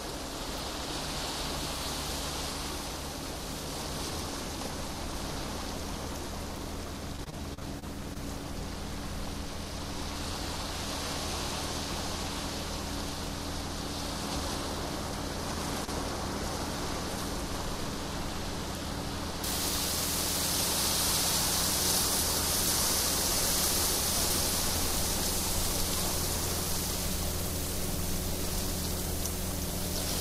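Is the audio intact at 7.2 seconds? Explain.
No. From 7.16 to 8.17 s the stream suffers repeated packet loss (robotic sound): data arrives lost or late again and again, and each hole is papered over by stretching the last sound received. About 170 ms is filled this way, with the longest hole near 35 ms, so 17% of the stretch is patched rather than real. At 7.2 s the sound is therefore choppy, with fragments missing.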